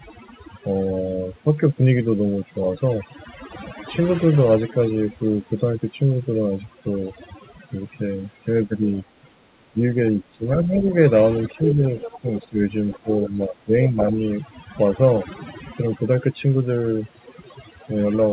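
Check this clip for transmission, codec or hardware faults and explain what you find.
The speech shows four distinct faults: heavy-handed noise reduction across the whole clip, plus a cluster of echo-canceller problems between 8.67 and 14.25 s. Nothing is heard above 4 kHz, which fits a G.711 A-law call path at 64 kbps.

Overdone noise removal runs throughout. The suppressor attenuated individual frequency bands whenever they came close to its noise estimate, taking the softer parts of the speech with them. The background drops and breaks up into twinkling specks.

Speech suppressed in double talk occurs at 8.67–9.05 s, 9.73–10.98 s, 11.48–11.82 s, 12.21–12.6 s and 13.03–14.25 s. The likely cause is an echo canceller that could not separate the near talker from loudspeaker echo and turned both down. The speech dips by roughly 10 dB, and by roughly 20 dB at 12.21 s.

Background gated by the echo canceller occurs at 9.33–9.45 s. 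With the loudspeaker active, the canceller pulled the microphone down hard for about a tenth of a second. The room tone drops by about 10 dB, then comes back once the canceller releases.

Other side's voice leaking through appears at 12.01–12.47 s and 12.91–13.0 s. It is likely residual loudspeaker echo that the canceller failed to remove. A second voice sits underneath, roughly 15 dB below the main speech in the first stretch and roughly 25 dB below in the second, brief scrap.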